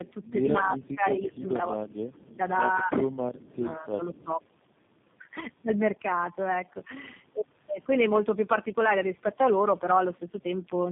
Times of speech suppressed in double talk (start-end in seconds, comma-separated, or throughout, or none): 0.60-1.75, 2.79-4.29